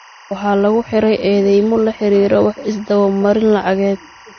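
Behind this speech clip, throughout, runs a steady chirping warble that flips between tones near 1 and 2 kHz, sitting roughly 25 dB below the speech. This is timecode bleed: a 24-frame linear timecode signal leaking in from a neighbouring track or cable, its square-wave code audible as that alternating pitch. The speech also sounds dull and smeared, with nothing above 6.4 kHz and the swirly artefacts of heavy MP3 compression, even though the file is stored at a high bitrate. The likely cause is low-bitrate audio saved at a high bitrate: the damage fits an original MP3 encode at around 32 kbit/s, later re-encoded at 320 kbit/s, which could not restore what the first pass removed.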